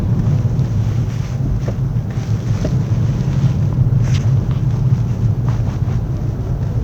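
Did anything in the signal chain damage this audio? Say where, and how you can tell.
No, nothing in this recording of sounds points to damage at any stage of the signal chain. There is no audible evidence of a problem at any point in the clip.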